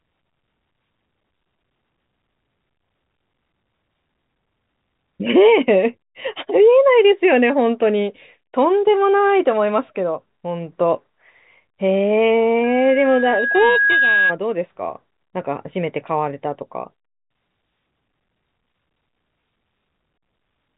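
From 12.63 to 14.35 s, loudspeaker feedback squeal: the microphone-speaker loop runs away at 1.6 kHz, swelling over about 1.5 s to speech level rather than starting abruptly.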